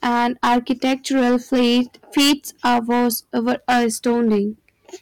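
Hard clipping runs through the whole speech recording. The signal was driven about 13 dB past what a stage could pass. Its peaks are sliced flat, roughly a tenth of all samples. Every loud syllable carries a harsh, buzzing fuzz.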